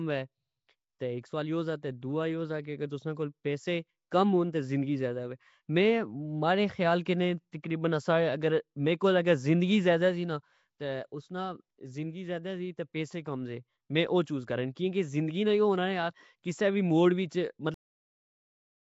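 Throughout, the speech carries a rough, hissy halo and a smeared, underwater quality, with nothing above about 7.7 kHz. This is likely Nellymoser compression, fitting a bitrate near 32 kbps. Weak bands are filled with noise rather than simply dropped, which gives a grainy fizz instead of the clean dullness of plain low-pass filtering.

At 7.52 s, just after "خیال کنے", a short hiss of about 12 ms arrives before a sharp attack. This is pre-echo: the block's coding noise, sized for the loud onset, leaks into the quiet moment before it. Unlike a true echo, it comes before the sound, not after.

At 17.74 s the audio is cut off mid-sound and drops straight into digital silence with no decay. This is a cut-off end, where the final buffers were never played. A fade-out would taper gradually, but here the sound simply stops.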